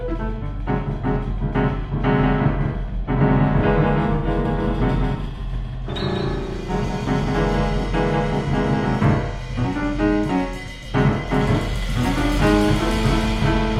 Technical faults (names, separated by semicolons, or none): doubled audio track; AAC frame loss with concealment